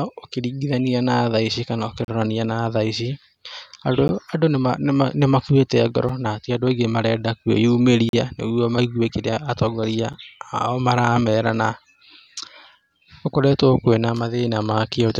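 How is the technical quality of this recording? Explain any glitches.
The speech is interrupted by a recurring glitch, a gap between stream segments. Five short silent holes fall about every 2 s: 2.05 to 2.08 s after "thaici kana", 4.08 s, 6.09 s before "ti andũ aingĩ marenda", 8.09 to 8.13 s, and 10.13 s. Adjacent 2-second segments leave timing gaps, and playback fills them with silence. Each is a hard-edged dropout, from under 10 ms up to about 40 ms.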